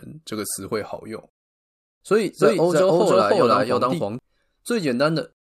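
From 2.41 s to 4.19 s the speech carries a doubled audio track: a second, full-band copy trails about 300 ms behind at roughly equal loudness, with no decay or room colour, switching in and out abruptly. The likely cause is a slower second capture path mixed back in.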